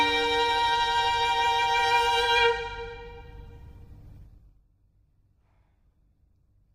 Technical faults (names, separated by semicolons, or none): zipper noise